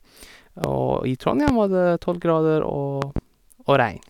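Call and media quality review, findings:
Loud pop at 0.64–0.68 s, 1.48–1.52 s, and a double pop at 3.02–3.20 s. Each is about 15 dB above the speech, which continues underneath. Likely a connector, switch or driver voltage transient.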